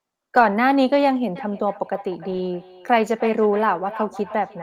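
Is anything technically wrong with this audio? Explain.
Yes, two faults are audible.

Between 0.35 and 0.45 s, and again between 2.29 and 2.47 s, there is a lost packet rebuilt from error correction. Packets went missing, and the decoder played the low-bitrate copies carried in the following packets, about 60 ms and 100 ms of rebuilt audio. The speech turns briefly rougher and noisier. Unlike packet-loss concealment, there is no gap, stretched tone or robotic hold.

From 1.36 s to the end there is a feedback echo between two devices. One device replays what another device's microphone sent, and that microphone picks it up again, beyond the reach of either echo canceller. The speech returns roughly every 0.3 s, thinner and ringing, at its loudest about 16 dB below the speech. Unlike room reverberation, these are distinct repeats at a fixed interval, not a smooth decay.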